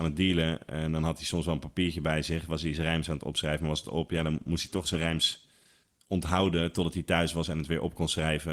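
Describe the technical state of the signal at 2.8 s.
At 2.8 s the speech signal is intact, with no dropout, clipping, glitch or other fault to be heard at that moment.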